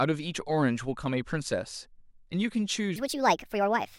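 Section at the wrong speed from 2.96 s to the end of this speech clip: the final second plays about 1.45 times too fast, so the speech turns hurried and rises roughly seven semitones at once, likely from that stretch being resampled or clocked at the wrong rate.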